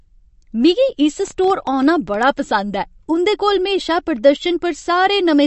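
Throughout, the speech sounds watery and swirly, with nothing above 8.1 kHz, plainly audible damage that likely comes from MP3 compression, which fits an encode of about 40 kbps.

From 1.28 to 2.15 s, just after "मिगी इस", roughly ten clicks about as loud as the speech tick at an uneven pace of about 9 per second. This train of clicks likely comes from interference from nearby equipment, a faulty connection or a power supply.

From 4.36 to 4.41 s, right after "ऐ उं'दे कोल म्हेशा", the level drops abruptly by about 6 dB for 50 ms. This is likely one channel dropping out, briefly losing one of two matching stereo channels.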